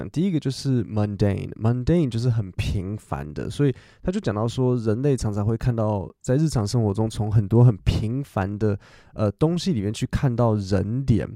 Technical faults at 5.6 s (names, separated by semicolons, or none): none